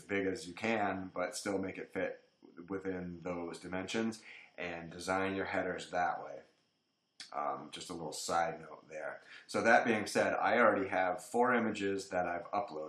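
Nothing technically wrong turns up anywhere in the audio: no dropouts, no level or timing problems, no added noise.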